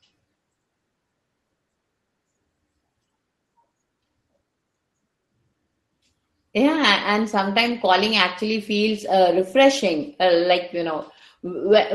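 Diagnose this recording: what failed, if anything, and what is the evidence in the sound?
Nothing failed: the speech carries the ordinary coding texture of a call path, with its top end stopping at 12 kHz in a way that fits an Opus stream at around 24 kbps.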